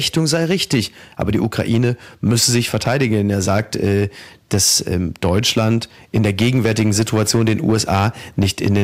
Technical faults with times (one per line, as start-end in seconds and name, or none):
0.00-8.83 hard clipping
2.86-2.88 loud pop